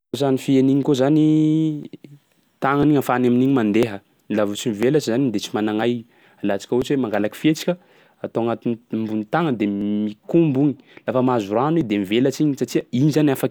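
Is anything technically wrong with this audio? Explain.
Yes. The speech has periodic USB or driver dropouts. From 0.83 s to 12.81 s, a tick sounds about once every second. At each one, something blocks the USB bus or the audio driver for a moment. Roughly a millisecond of audio is lost. The missing samples are skipped, not padded with silence, so the waveform jumps. That jump is the click. The ticks are evenly spaced and are heard only where there is signal.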